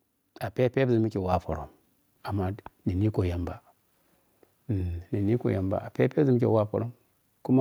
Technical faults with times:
1.32 microphone volume stepped up

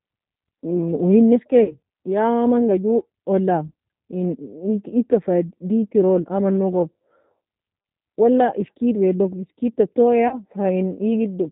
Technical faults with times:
0.00-11.51 G.729 codec
1.64-1.76 VoIP packet loss concealed by the speech codec
3.68-3.72 VoIP packet loss concealed by the speech codec
10.28-10.37 VoIP packet loss concealed by the speech codec

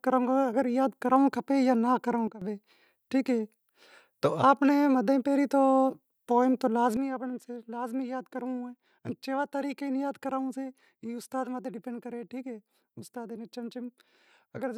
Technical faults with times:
2.28-2.41 sudden gain jump
6.97-14.78 sudden gain jump

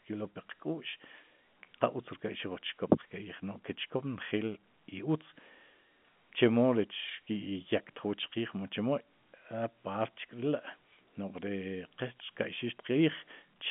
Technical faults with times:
none

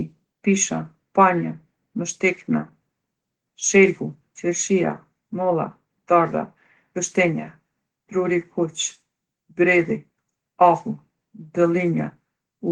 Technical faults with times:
0.00-12.72 Opus voice compression

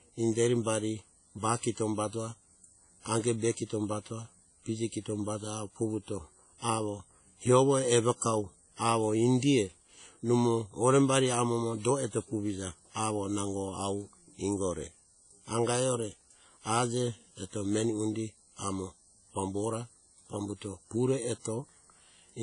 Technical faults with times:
0.00-22.42 WMA compression

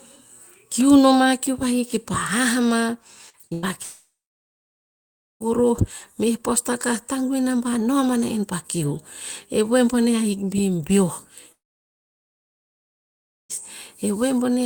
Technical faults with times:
3.29-3.65 repeated packet loss (robotic sound)
3.83-5.42 long network dropout
11.52-13.51 long network dropout

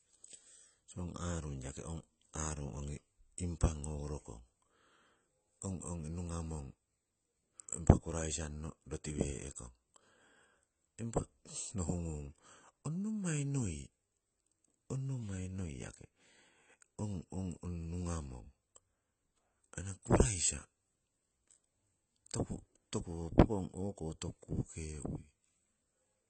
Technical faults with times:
0.00-26.29 AAC compression

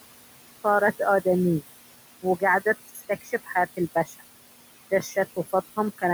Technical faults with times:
0.00-6.13 noise suppressor artifacts
2.88-3.56 speech cut by the noise suppressor
3.95-4.22 speech cut by the noise suppressor
4.91-5.78 speech cut by the noise suppressor

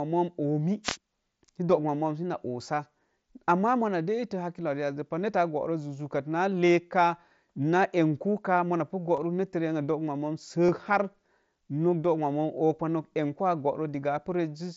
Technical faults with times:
0.83-0.97 wireless microphone noise hit
9.16 concealed Bluetooth headset packet loss
10.67-10.69 concealed Bluetooth headset packet loss

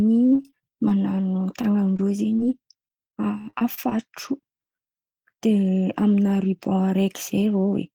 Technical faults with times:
0.35-1.25 repeated packet loss (robotic sound)
1.97-2.00 short concealed packet loss
2.36-2.40 short concealed packet loss
2.88-3.93 repeated packet loss (robotic sound)

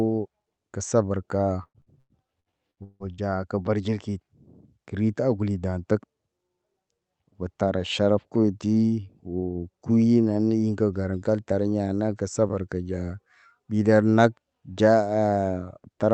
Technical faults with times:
1.63-3.21 repeated packet loss (robotic sound)

